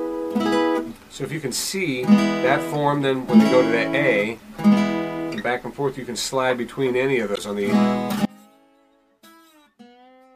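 At 4.35 to 4.40 s and again at 7.33 to 7.38 s, brief glitches break through. This is damaged data in a compressed stream. The decoder misreads corrupt frames and resyncs. From 8.25 s to the end, the sound drops abruptly to a faint residue, roughly 30 dB down. This audio dropout is likely a lost signal feeding a path that stayed live.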